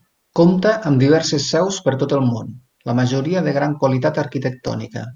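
Nothing stood out as a problem on listening to this recording.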